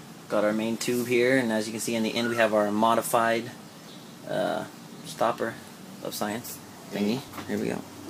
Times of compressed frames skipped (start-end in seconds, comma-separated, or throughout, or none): 2.16